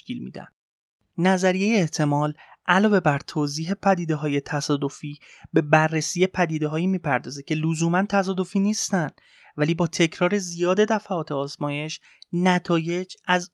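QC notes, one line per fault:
No faults heard in this speech recording.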